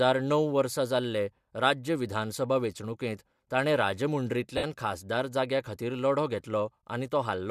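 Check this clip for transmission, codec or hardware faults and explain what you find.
One transmission fault appears: lost LE Audio frames, from 4.57 to 4.64 s, just before "खासदार जाग्या खातीर". About 60 ms of the Bluetooth stream never arrived, which fits eight 7.5 ms frames going missing. The decoder covered the gap by repeating the last good spectrum with scrambled phase and fading it down. The speech therefore smears into a short, noisy blur rather than a hard dropout. Around it, the light grain in the upper band is likely ordinary LC3 coding at 64 kbps, not a fault.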